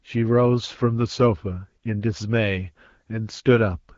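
No technical faults are present in this speech clip, which carries the band-limited character of AMR wideband (HD Voice) coding at a rate consistent with about 12.65 kbit/s.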